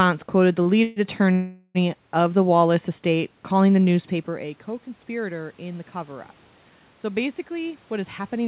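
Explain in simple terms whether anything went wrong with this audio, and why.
A short stall from a late packet happens at 0.62 to 0.68 s. One piece of the call arrived late, so the receiver held the last bit of sound for about 34 ms until it came, then carried on. Nothing is lost, but that moment drags slightly.

A call audio freeze occurs twice, at 0.84 to 0.99 s and at 1.32 to 1.78 s. The sound hangs and trails off as a fading buzz, for about 128 ms and then about 424 ms, the second ending in a tiny silence. The likely cause is delayed packets emptying the receiver's waiting store. Afterwards the speech resumes exactly where it stopped.

A jitter buffer speed-up runs from 7.40 s to the end. Too much audio had piled up, so the receiver trimmed many tiny slices, about a tenth of a second in total. The speech plays roughly 9% faster at the same pitch and sounds slightly hurried.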